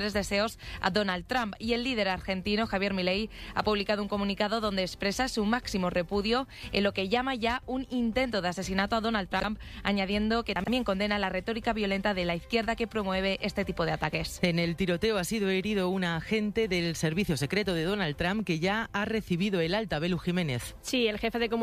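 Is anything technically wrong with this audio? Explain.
Yes, there are two spots with chunks out of order, from 9.32 to 9.44 s and again from 10.56 to 10.68 s. Each time, a 40 ms piece of audio turns up two chunks late, so it plays after the two pieces that should have followed it. Nothing goes missing, but that 120 ms stretch comes out scrambled, with three hard joins, so you hear a brief jumbled hiccup.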